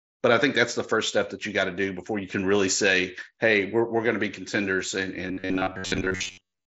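From 5.28 s to the end, the speech turns into a rigid, metallic buzz with a fixed pitch of about 94 Hz, still loosely following the syllables. This is robotic sound from repeated short buffers, likely caused by the playback side repeating a roughly 10.7 ms chunk while most of the real audio is skipped. A spectrogram shows evenly spaced harmonic lines at multiples of 94 Hz, capped by the mSBC headset band limit near 8 kHz. The waveform shows a short cycle roughly repeating.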